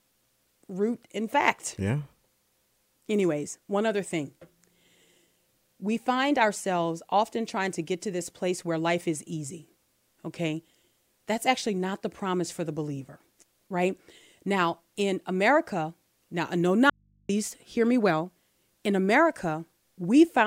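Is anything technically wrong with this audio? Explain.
Yes, there's an audio dropout to a faint residue. Right after "now no", from 16.90 to 17.29 s, the speech cuts out abruptly for about 0.39 s and comes straight back on "hear me well". The gap isn't silent: there's a low mains hum sitting roughly 40 dB under the speech. That points to the signal likely being lost upstream while the input stayed open, so the rest of the chain kept passing whatever hum was left.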